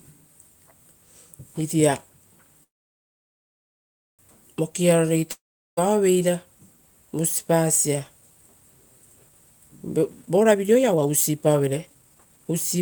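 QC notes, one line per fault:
2.63–4.21 s, call audio freeze: the sound breaks off, the last instant smears into a brief fading buzz, and then about 1.53 s of silence follows. Playback resumes where it stopped with nothing skipped, likely because delayed packets drained the jitter buffer, adding roughly 1.55 s of delay.
5.31–5.79 s, long network dropout: a short decaying fill gives way to about 0.38 s of silence, and the sound returns with roughly 0.46 s of material gone. Packets likely never arrived, so that stretch was concealed rather than played late.
9.97–12.79 s, jitter buffer speed-up: the speech runs at about 142% of normal pace with pitch unchanged, sounding hurried. The receiver trimmed many short pitch-period slices, around a second in total, to shrink an overfull buffer and cut the delay.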